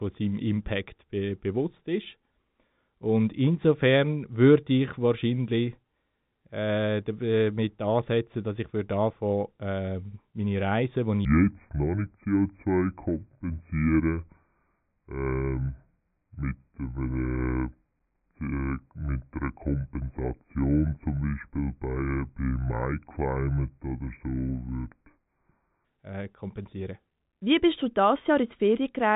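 Section at the wrong speed from 11.25 to 25.85 s, starting after "die ich" and ending before "äh kompensieren". The speech plays at 0.658 times its recorded rate, so it drags and sinks about seven semitones, likely from playback against a mismatched clock.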